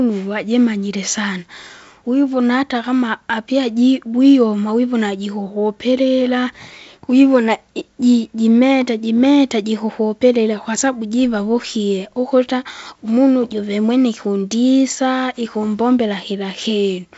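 No technical faults can be heard in this speech, which carries the sound of G.722 wideband telephone coding at what points to 56 kbit/s, with nothing above 7.7 kHz and only the light hiss and slight lower-band grain that this coding leaves behind.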